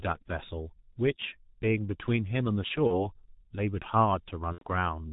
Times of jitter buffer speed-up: none

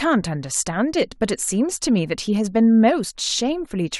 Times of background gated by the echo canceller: none

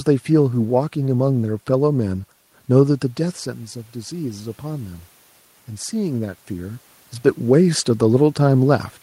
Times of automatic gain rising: 3.18-5.09

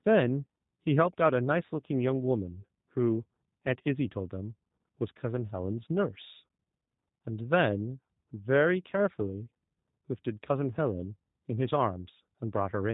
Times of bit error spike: none

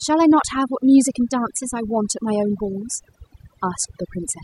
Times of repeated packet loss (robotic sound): none

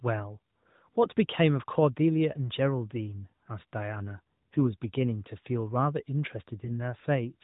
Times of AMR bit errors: 1.04-1.12, 4.54-4.74, 6.64-6.73

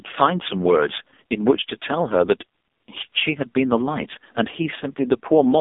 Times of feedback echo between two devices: none

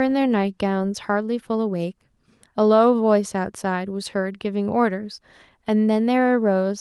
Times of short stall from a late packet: none

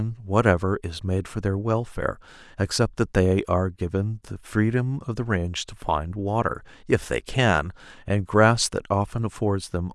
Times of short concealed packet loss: none

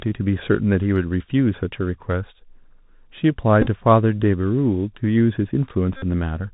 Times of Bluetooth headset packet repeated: 3.62-3.67, 5.97-6.03

